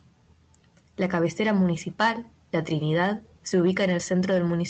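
No faults are audible in the speech; it reaches the listener through an Opus call path with the top end rolled off around 8 kHz, as expected for that link.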